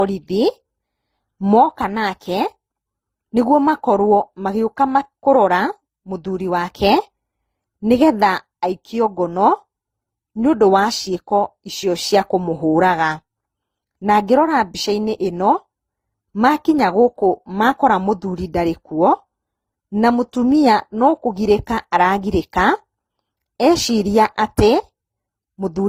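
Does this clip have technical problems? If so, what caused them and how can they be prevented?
Yes. Throughout the speech there is transcoding between lossy codecs. Several different kinds of artefact are layered together rather than one codec's single signature, and nothing remains above 15.7 kHz, likely from repeated low-bitrate re-encoding. To prevent it, encode only once, directly from the original source.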